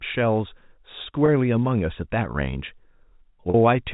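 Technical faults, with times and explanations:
1.26–1.28 s and 3.50–3.54 s, packet loss with pitch repetition: two short gaps in the speech were bridged by repeating the last pitch period. This produces a briefly held, buzzy tone: about 20 ms at the first point, consistent with one lost packet, and about 40 ms at the second, consistent with two. On the waveform, identical cycles repeat while their amplitude shrinks. On the spectrogram, the harmonics run flat and frozen, beneath the 4 kHz ceiling of the G.711 telephone band, before the normal contour resumes.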